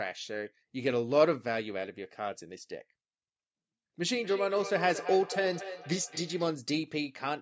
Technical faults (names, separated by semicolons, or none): feedback echo between two devices